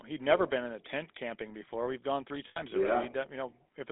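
Throughout, the GSM full-rate codec's pulse-driven vocal-tract model, consistent with 13 kbps, gives plainly audible buzzy, gravelly roughness within a 300 Hz to 3.6 kHz line band.

From 2.48 to 2.62 s, after "gone three", lost GSM frames are filled by repeating the last good frame, producing a brief metallic ring.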